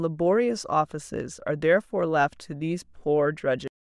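At 3.68 s the speech is chopped off mid-sound, a cut-off end: the final buffers never reached the output, so instead of decaying naturally the audio drops straight to digital silence for the last 0.26 s. The waveform ends abruptly mid-sound, and the spectrogram shows a sharp vertical edge followed by blank.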